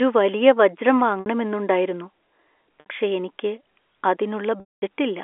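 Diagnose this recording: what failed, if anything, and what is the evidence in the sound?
Packet loss with pitch repetition in the network: the receiver looped the last pitch period to cover missing packets. The 60 ms gaps at 1.2–1.26 s and 2.8–2.86 s sound briefly held and buzzy. The 220 ms gap at 4.6–4.82 s fades to silence before speech cross-fades back.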